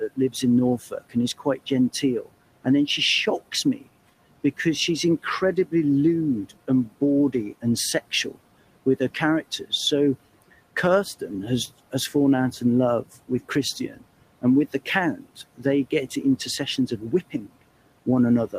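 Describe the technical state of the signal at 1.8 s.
At 1.8 s the audio sits inside a stretch of speech cut by the noise suppressor, running from 0.0 to 2.66 s, just before "then she". The suppressor mistook parts of the speech for noise and turned them down by as much as about 17 dB, roughly 0.4 s in total, so soft consonants and endings sound swallowed. On a spectrogram the weak high-frequency consonant energy is missing. On the waveform, onsets and tails look clipped short.

Noise suppressor artifacts are present here too, as they are throughout. The suppressor lowers the room noise, which sits about 20 dB below the speech, by about 18 dB between phrases and lets it back under them. A spectrogram shows a patchy, flickering floor that is darker in gaps and fills in beneath speech.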